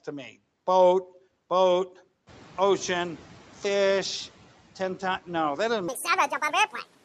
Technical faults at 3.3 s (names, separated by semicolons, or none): noise suppressor catching up